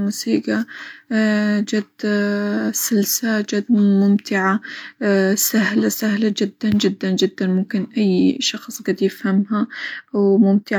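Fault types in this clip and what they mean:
No fault types are present in this clip.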